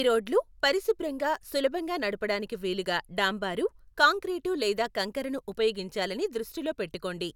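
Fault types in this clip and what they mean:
No technical fault can be heard anywhere in this speech recording, with the signal intact and continuous throughout.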